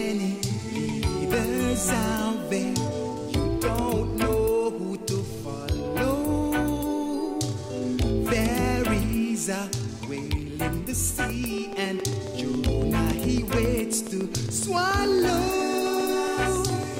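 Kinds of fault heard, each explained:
Train of clicks: from 11.30 s to the end, regularly spaced pulses arrive 7.2 times a second, about forty in all, ticking well above the sound, likely from interference or a faulty connection or power supply. A spectrogram shows evenly spaced thin vertical lines, and the waveform shows similar sharp spikes.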